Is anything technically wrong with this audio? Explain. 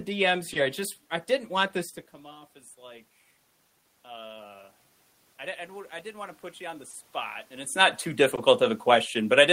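Yes. The sender's audio clock runs roughly 1.5 percent slower than the receiver's. This clock drift between sender and receiver keeps draining the jitter buffer, so small timing hiccups recur unevenly throughout the speech.

At 0.53 to 0.57 s, 6.91 to 6.95 s and 8.35 to 8.39 s, there is a short stall from a late packet. Each time the buffer ran empty, the receiver stretched the last sound to fill 20 ms, adding 20 ms of delay. Nothing is lost, but a sound hangs slightly too long.

From 2.04 to 6.46 s come repeated timing corrections. The receiver repeats small pieces to keep pace, playing at about 98 percent speed and adding around 70 ms in total. This is heard, if at all, as a faintly dragging, uneven tempo, separate from the level change where the talker moves near 2 s.

From 8.84 s to the end, the automatic gain is falling. The control judged the input too loud or its background noise too strong and eased its gain down, so the speech and room noise sink together.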